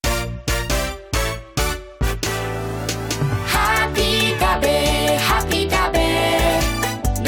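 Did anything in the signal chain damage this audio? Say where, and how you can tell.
No, no signal-chain damage heard.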